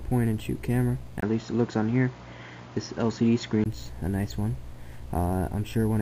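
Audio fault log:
1.20–3.66 s, input switched to a poorer device: a 20 ms gap, then the sound goes dull with nothing above 7.2 kHz and a faint new background noise, at about the same overall level, until it opens back up at 3.66 s. Likely another mic or headset profile took over.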